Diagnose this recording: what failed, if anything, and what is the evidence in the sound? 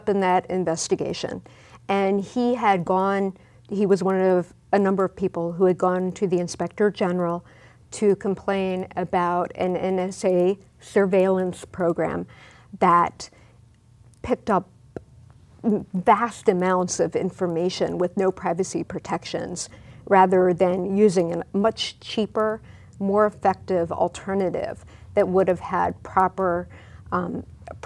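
Sample-rate conversion: resampler restarted on every block. Steady 10 Hz ticks mark each 100 ms block edge, present only with signal, and without the audible gaps of buffer underruns.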